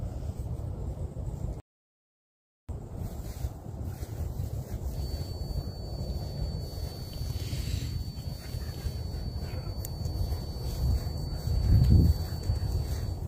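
At 1.6 s the audio cuts to silence and resumes at 2.69 s, a rebuffering stall. Playback consumed everything that had been downloaded and halted until more data arrived, then picked up exactly where it had stopped. No material is missing; the gap simply inserts about 1.09 s of dead time into the timeline, so everything after it plays that much later than it should.

From 4.9 s to the end of the clip, a thin, steady tone at 4.5 kHz sits behind the sound, around 20 dB below the main signal and swelling and fading slowly in level. This is a feedback whistle, likely caused by a loudspeaker-to-microphone loop held right at the edge of instability. A single frequency keeps ringing but never builds into a runaway howl, so it persists at a low level throughout.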